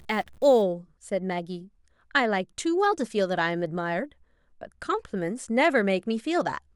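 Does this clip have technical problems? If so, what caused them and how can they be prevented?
Yes. From 0 to 0.62 s the speech carries a grainy noise consistent with a stuck bit, with the likely cause being a data line or converter bit held at a fixed value. About half the samples are pushed off by that bit's weight, roughly -50 dBFS, so low-level passages pick up a fizzy noise floor that tracks the waveform's sign changes. Checking converter wiring and running a bit-pattern test on the interface before recording would prevent it.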